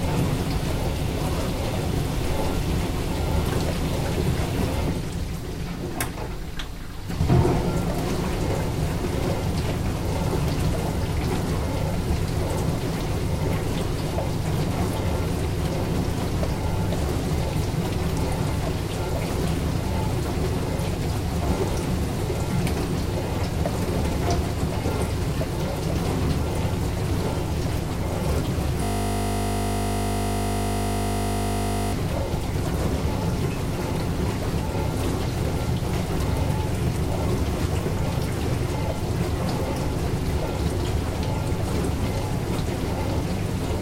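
From 28.84 to 31.93 s a system hang loop takes over. The host or driver stalled while the audio hardware kept replaying the same 20 ms section of its ring buffer, so one short piece of sound repeats exactly, roughly 150 times in a row. Because the repeated piece is so short, it is heard as a steady, pitched buzz at the 50 Hz loop rate rather than a stutter. The loop length points to a ring buffer of about 20 ms.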